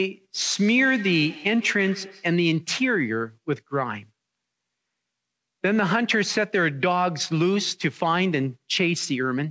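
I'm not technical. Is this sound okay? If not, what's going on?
No. From 0.55 to 2.39 s each bit of speech comes back as a thin, ringing repeat roughly every 150 ms. That's feedback echo between two devices: two devices in the same room share one call, and each microphone picks up the other's speaker.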